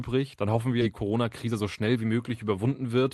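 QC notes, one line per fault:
0.81 s, skip ahead: right after "hoffen wir" the speech jumps forward with no gap, losing roughly 0.7 s of audio dropped while later packets were already waiting.
1.03–3.05 s, jitter buffer speed-up: speech sounds hurried at unchanged pitch, running at 112% as the overfull buffer trimmed short pitch-period pieces, about 0.3 s in total.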